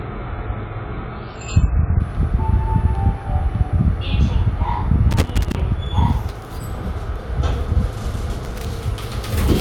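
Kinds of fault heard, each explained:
Adaptive stream starting at a low bitrate: For the first 2 seconds the player is on a cheap, low-bitrate version of the stream, which fits something like 12 kbit/s AAC, so it can begin fast. Nothing above 7.5 kHz gets through, the top sounds dull and a bit smeared, and codec artefacts are more obvious. At about 2.0 s it jumps to a much better stream, which fits around 96 kbit/s, and the treble comes back abruptly with no gap.
Loose connector crackle: A worn or dirty contact somewhere in the chain keeps making and breaking as it shifts, chopping the signal into rough little bursts. You get two patches of it, from 5.11 to 5.60 s and again from 8.45 to 8.65 s. Both are irregular scratchy crackle rather than a steady tone or a single clean click, which points to a physical connection rather than a software glitch.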